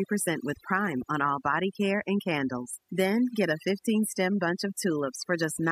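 From start to finish the speech carries overdone noise removal. The noise reduction was pushed too hard, so individual frequency bands near the estimated noise level are cut deeply or muted. The gaps drop and break up into twinkling specks.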